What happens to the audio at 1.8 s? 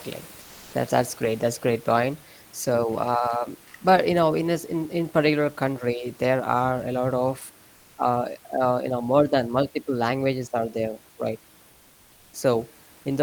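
Nothing goes wrong at 1.8 s: the speech carries on intact, with only the room noise sitting about 30 dB below it.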